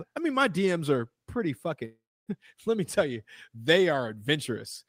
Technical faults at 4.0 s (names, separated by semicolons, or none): none